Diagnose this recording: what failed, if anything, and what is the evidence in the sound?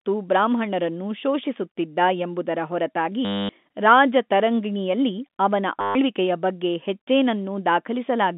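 Network stage: packet loss with last packet repeated. After "ಬ್ರಾಹ್ಮಣರನ್ನು ಶೋಷಿಸುತ್ತಿದ್ದ ಎಂಬುದರ ಹೊರತಾಗಿ", 3.25–3.49 s (240 ms), and after "ಎಂಬುದರ ಹೊರತಾಗಿ ರಾಜತರಂಗಿಣಿಯಲ್ಲಿ ಅವನ", 5.81–5.95 s (140 ms), the G.711 telephone-band speech stutters robotically. The receiver loops one fragment, with a 100 Hz buzz that fits 10 ms packets.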